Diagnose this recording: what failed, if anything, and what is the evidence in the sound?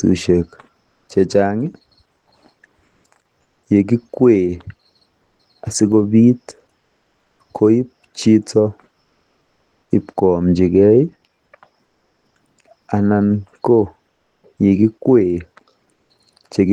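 Comfort noise in place of the background at 0.81, 2.85, 3.41, 6.79 (before "koib chito"), 11.85 (before "anan ko") and 15.93 s: the faint room tone turns flat and featureless, likely from codec discontinuous transmission (DTX).

Channel delay (comb filtering) from 10.19 to 11.31 s: the top end goes dull, with a notch around 10 kHz. That fits one channel arriving a couple of samples late before the mono sum.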